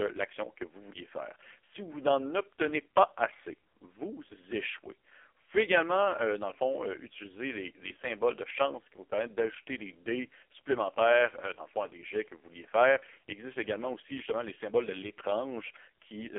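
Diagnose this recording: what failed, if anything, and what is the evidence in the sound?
AMR narrowband mobile codec damage runs throughout, at the codec stage. Nothing above 3.4 kHz survives, the band sits near 300 Hz to 3.4 kHz, and the speech sounds heavily buzzy and synthetic. This fits AMR-NB's lowest 4.75 kbps mode rebuilding the voice from sparse pulses.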